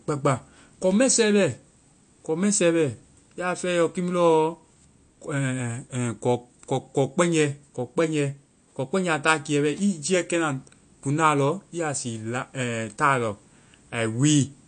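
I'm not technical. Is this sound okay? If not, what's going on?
No. The speech sounds watery and swirly from start to finish, and the s sounds come out smeared and metallic. Nothing remains above about 9.1 kHz, so the top of the sound is missing and it feels dull. This is likely MP3 compression squeezed too hard. To save space, the encoder cuts off the treble and throws away quiet detail. Those fragments flicker on and off, which causes the swirl.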